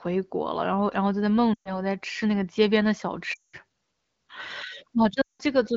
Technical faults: lost AMR speech frames

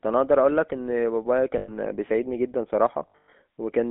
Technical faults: GSM full-rate codec; lost GSM frames

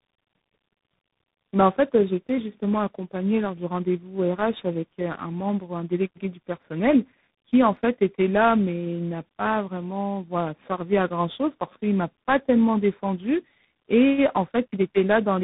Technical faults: tandem speech coding

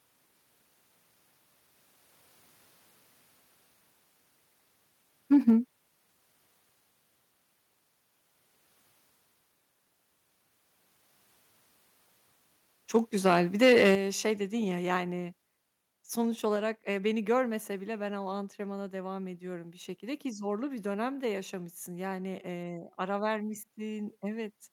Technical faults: microphone overload; microphone volume stepped down

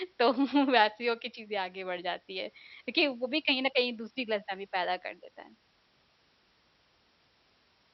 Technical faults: none

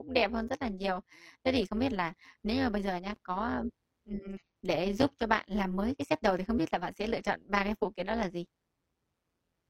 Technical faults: overlap-add ripple; block of digital silence; damaged data in a compressed stream

